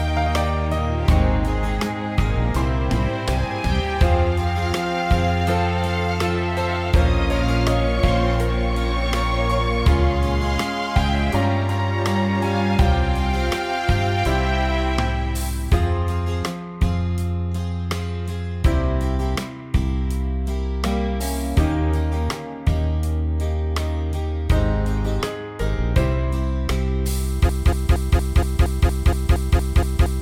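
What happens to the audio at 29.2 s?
At 29.2 s the audio is stuck in a broken-record loop that begins at 27.49 s and runs to the end. A fragment of about 0.23 s repeats exactly, back to back, 12 times, most likely because the player or stream stalled and kept resending the last piece it held. Unlike an echo or reverb tail, each repeat is identical and full-level with no decay, and no new audio follows.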